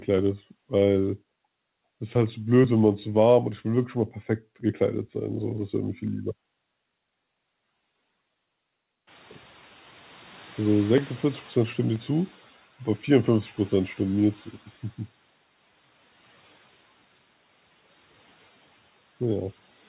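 From 0.19 s to 19.80 s, periodic USB or driver dropouts recur every 0.49 s. Something blocks the audio path at a fixed interval. Each time, around 10 ms of audio is skipped outright. About forty ticks result, audible only over speech.

At 9.07 s the room noise jumps by about 18 dB. The noise suppressor is catching up. Its noise estimate lags, so the noise first passes with little reduction. It then sinks by about 9 dB over 3.4 s, settling near 12.47 s. The call path's band limit stops everything above 4 kHz, which fits G.711 mu-law.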